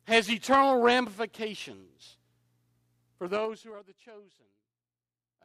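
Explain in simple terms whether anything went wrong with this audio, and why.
From 3.16 to 3.81 s the volume dropped in coarse jumps, about ten a second, causing zipper noise: a ticking rattle over the fading speech.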